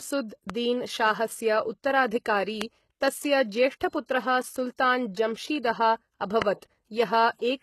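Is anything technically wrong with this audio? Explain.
Yes, two things. Throughout, the treble is plainly smeared and gritty with nothing above 12.3 kHz, likely HE-AAC at a rate that fits about 16 kbps, rebuilding highs from copied lower bands.

There are also three loud pops, each about 20 ms long: at 0.50 s just before "दीन शाहस्य", then at 2.62 s and 6.42 s, roughly 15, 20 and 20 dB above the speech. Likely voltage spikes added to the signal.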